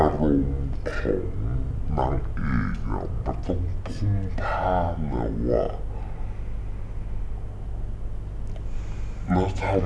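From start to end, the speech plays at half speed and a full octave low. This wrong sample rate fits 44.1 kHz audio being played back near 22 kHz.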